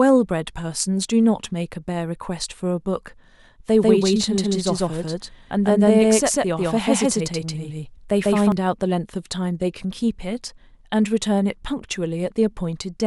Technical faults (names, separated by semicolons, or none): doubled audio track